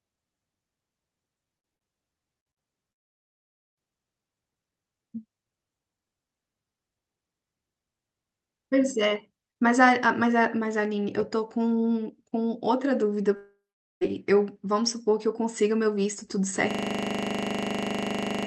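Speech, carried over a call codec that fits Opus with its top end rolled off near 8 kHz, breaks up early with four brief stutters at 1.57, 1.75, 2.40 and 2.51 s. Each is a short held buzz or hiss that fades before the sound jumps ahead. That is a burst of packet loss: about 60 ms of audio went missing each time, and the receiver stretched the last sound over the gap. Longer holes follow from 2.92 to 3.79 s and from 13.36 to 14.09 s, where the sound cuts out into silence (about 0.44 s of it in the second) before resuming further on. The likely cause is a long network dropout that left nothing to play. From 16.71 s to the end, a 40 ms fragment repeats over forty times as a steady 25 Hz buzz, a system hang loop in which the hardware kept cycling one buffer while the machine stalled.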